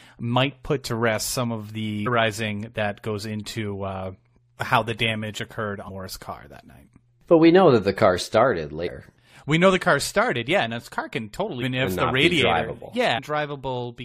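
Damaged data in a compressed stream occurs five times: at 2.06 s, 5.88–5.90 s (after "how the damage occurred", before "car that night"), 8.86–8.88 s (after "that the car started"), 11.61 s (after "and this car can") and 13.17–13.19 s. Each lasts 20 ms or less and is heard as a chirp, squawk, click or short hole. Corrupted bytes make the decoder misread frames and lose sync until it finds the next frame header. This differs from ordinary codec artefacts, which run through the audio continuously; these are isolated, abrupt breaks.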